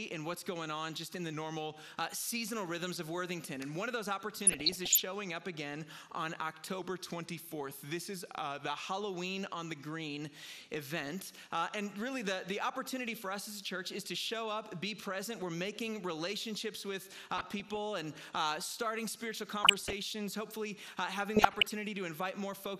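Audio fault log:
throughout: MP2 compression. The whole clip sounds dull and gurgling, with a granular roughness and upper frequencies that come and go. This is likely MP2 encoding at a bitrate too low for the content. Layer II divides the spectrum into 32 sub-bands and shares out a fixed bit budget. At this level the top bands are switched off intermittently, and the remaining bands are quantised coarsely. The damage is plainly audible and fits a rate of around 80 kbps.
1.33–1.86 s and 6.79–8.70 s: drift correction step. In both spans the audio slows by about 5.6% and drops close to a full semitone (about 100 cents). Because speed and pitch move together and switch abruptly, the likely cause is clock-matching software changing the playback rate in a single step to manage its buffer. The detuning shows most clearly on held tones.
4.40–5.00 s, 17.38–17.77 s, 19.63–19.93 s and 21.36–21.73 s: DAB burbling. 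Each burst puts short blips of noise into single sub-bands over the programme. Bit errors have passed the error correction into the MP2 stream and corrupted samples across a run of consecutive frames. The density of the disturbance points to a bit error rate of roughly 0.4 to 0.5 percent in each burst.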